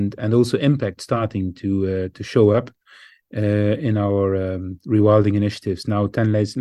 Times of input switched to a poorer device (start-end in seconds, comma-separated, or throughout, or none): none